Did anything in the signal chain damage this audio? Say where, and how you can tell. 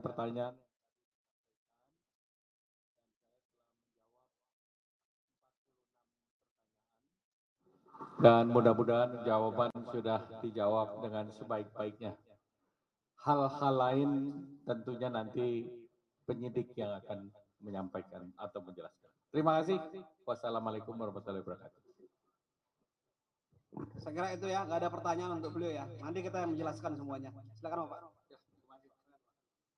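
Yes, sound cut by the noise suppressor in call processing at 12.17, 15.86, 17.31, 18.9, 20.1, 21.57 and 28.09 s: sound, mistaken for noise, sinks about 17 to 19 dB.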